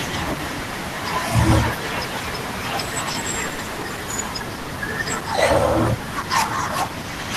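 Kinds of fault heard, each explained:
Repeated packet loss (robotic sound): from 3.11 to 3.85 s, five separate gaps, the longest 70 ms, are bridged by extending the preceding sound, covering about a quarter of that stretch. The close succession of patches, not one isolated repair, gives the choppy texture.
Jitter buffer speed-up: from 3.83 to 4.05 s, a backlog of buffered audio is drained by cutting out short pitch-period slices, around 40 ms in all. The sound runs about 15% fast while pitch stays unchanged, which separates it from a resampling error.
Short concealed packet loss: between 4.62 and 4.69 s, 40 ms of missing audio is replaced by continuing the last sound and blending back in. It is a single brief smear, unlike the clustered patching heard earlier.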